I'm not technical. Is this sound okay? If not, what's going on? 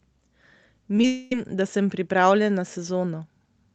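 No, there are two problems close together.

Short concealed packet loss, at 0.96 s and again from 1.01 to 1.04 s: tiny pieces of the call arrived too late. The receiver patched each hole by stretching the sound just before it, so you hear a brief smear or wobble.

Long network dropout, from 1.06 to 1.32 s: for about a quarter of a second the speech is replaced by a stretched-out continuation of the last sound that buzzes or hisses and fades. The cause is likely a break in the connection, and the speech that was lost there doesn't come back.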